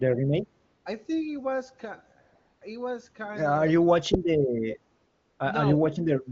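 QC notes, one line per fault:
0.65–0.85 s, 2.21–2.61 s and 4.95–5.39 s: AMR comfort noise. The sending phone judged the talker silent and stopped transmitting speech frames for 200, 400 and 440 ms. The receiver filled each gap with synthetic noise, so the real background gives way to a smooth, steady hiss that switches in and out.
3.71–3.75 s: echo leak. The far end's echo canceller likely let part of its loudspeaker pickup through. That returns a very faint scrap of the voice, roughly 35 dB down, delayed by 293 ms, as a brief ghostly trace behind the speech.
5.74–6.32 s: speech suppressed in double talk. With both sides talking at once, the echo canceller likely could not separate the talker from the loudspeaker echo and turned everything down. Over about 400 ms in total, the voice dips by as much as roughly 35 dB. The AMR-WB link at 23.85 kbit/s adds at most faint coding colour.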